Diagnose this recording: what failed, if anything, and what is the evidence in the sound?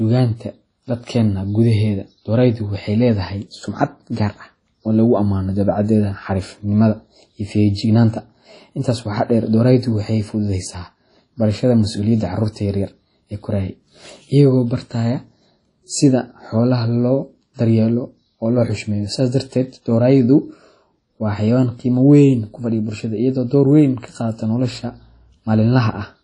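Codec stage, throughout: the speech sounds ringing and washy, hiss breathes with it, and nothing exceeds 10.1 kHz. This is likely WMA compression at a low rate, around 32 kbps.

Pre-echo at 17.54–17.59 s, before "daryeelo oo": 47 ms of hiss precedes a smeared attack. The codec spreads quantisation noise across the whole block.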